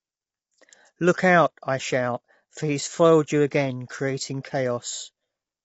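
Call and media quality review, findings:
Low-delay AAC compression across the whole clip, start to end. Speech sounds rough and grainy throughout, with a noisy haze between the harmonics and nothing above 7.8 kHz. Likely AAC-ELD on the call path. Its short frames smear pitch structure and spend bits fast, so at a rate that fits around 24 kbps the coder fills the gaps with noise and drops the top band. Damage is plainly audible.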